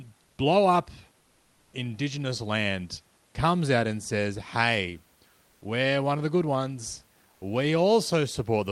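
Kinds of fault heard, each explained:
sound dropped by the voice detector: The voice detector likely mistook speech for background and stopped sending, so from 0.23 to 0.37 s speech gives way to steady noise.
comfort noise in place of the background: Transmission likely paused and the receiver filled in synthetic noise; from 5.45 to 5.61 s the background turns featureless, at the same level.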